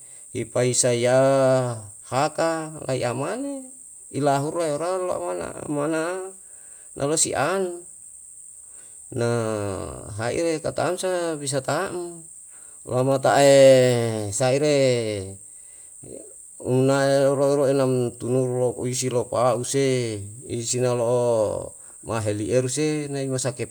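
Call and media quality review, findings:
Nothing stood out on listening to this speech recording.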